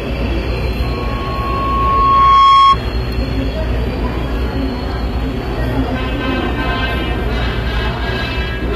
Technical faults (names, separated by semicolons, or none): HE-AAC compression; loudspeaker feedback squeal